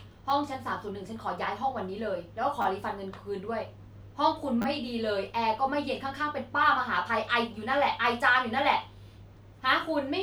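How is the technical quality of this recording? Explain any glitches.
The speech has three short glitches, all repeated buffers. At 0.30 s a tiny slice plays twice, which is just a quick click. At 2.62 to 2.65 s and again at 4.62 to 4.65 s the same slice plays four times in a row, giving a brief buzzy stutter. New audio didn't reach the device in time, so it replayed its last chunk, and the repeat length fits a 10 ms buffer. Essentially nothing is lost, though each repeat adds a little time.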